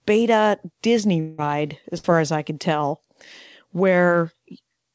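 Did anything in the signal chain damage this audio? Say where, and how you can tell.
Yes, at the network stage. From 1.20 to 1.40 s the speech stops moving forward. The last sound is held as a buzz or hiss that fades over about 180 ms. It never falls to full silence. Speech then picks up further on, and that stretch of audio is simply gone. This is likely a long network dropout. No audio reached the receiver, and its concealment stretched the final sound until fresh audio came in.

A second, shorter gap sits at 1.98 to 2.06 s. This one is a burst of packet loss, also on the network side. About 56 ms is filled with a held, fading continuation of the preceding sound, and about 60 ms of the real audio is missing. The jitter buffer had nothing to play, so it extended what it last had. The audio also ends sharply at 8 kHz, which fits the G.722 call codec on this path.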